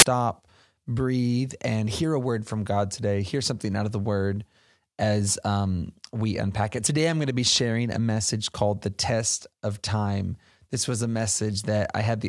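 At the very start, from 0 to 0.02 s, there is a short burst of loud static with hard edges. This is file tags played as audio. An embedded cover picture, stored as compressed data, was read as samples. That yields very loud white noise lasting about 24 ms.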